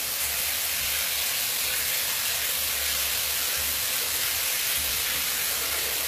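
Everyday sounds here, and the whole clip carries plainly audible HE-AAC compression, or at least that's the likely cause. The treble is bright but synthetic and metallic, as if rebuilt from lower bands rather than the original, and nothing sits above about 14.9 kHz. That fits a low bitrate around 20 kbps.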